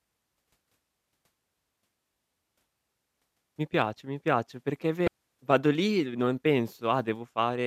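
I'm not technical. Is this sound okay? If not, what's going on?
No. There's damaged data in the compressed stream from 5.04 to 5.08 s, just before "vado lì e". A stretch of the stored file was corrupted, so the player briefly lost its place and made a short glitch before picking the speech back up.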